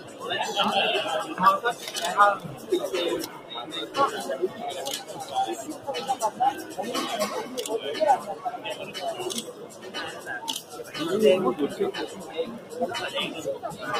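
A speech-tuned noise suppressor applied to music or sounds runs through the whole clip, treating sustained, steady material as noise and pulling it down, so held sound and tails sink while onsets pass, giving a pumping level swing of around 10 dB. Sound cut by the noise suppressor is clearest at 0.0–0.23 s, 2.42–2.71 s, 3.27–3.96 s, 4.49–5.14 s, 5.69–6.75 s, 8.3–10.94 s and 12.07–12.74 s, where sustained content drops by about 7 to 8 dB and decays are shortened. The longest stretch is 8.3–10.94 s.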